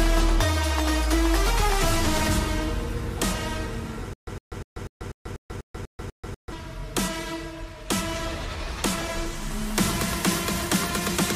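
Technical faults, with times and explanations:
4.13 to 6.52 s, stutter with silent gaps: a 108 ms burst repeats nine times with 137 ms of dead air between, likely a stalled stream replaying its last chunk.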